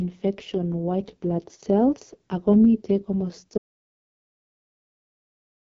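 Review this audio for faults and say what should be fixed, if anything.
The whole clip carries the AMR wideband (HD Voice) codec at its lowest mode, 6.6 kbit/s. The damage is heavy. The speech sounds rough and raspy throughout. Above 6.4 kHz the codec replaces real detail with shaped noise, and nothing is present above 7.1 kHz. At this rate the vocal tract model has too few bits for its pulse excitation, so the speech turns rough. To prevent this, record or transmit at 12.65 kbit/s or higher.

An audio dropout to silence starts at 3.58 s and lasts to the end of the clip. The speech stops mid-flow. What follows is silence with no room tone underneath. That points to the input being lost while the recorder kept writing silence. The likely cause is a disconnected device, a broken link or an accidental mute. Whatever was said after 3.58 s is gone. To prevent this, secure the connections and monitor the input levels while recording.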